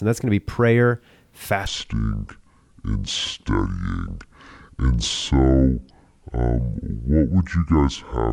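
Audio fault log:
1.67 to 8.33 s, section at the wrong speed: right before "to say um" the speech drops to 0.58 times normal speed and stays there to the end, so everything sounds dragged out and sunk by around ten semitones, close to an octave down. Pitch and tempo fall together at the same instant, which is the giveaway. This most likely comes from that stretch being played back against the wrong clock rather than from any change in how it was spoken.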